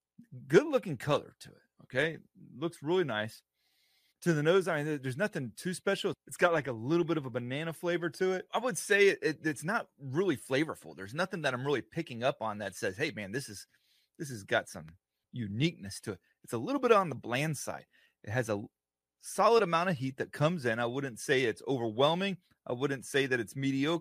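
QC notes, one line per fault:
Nothing to flag here, as far as my ears go; the speech comes through without anything that needs a note.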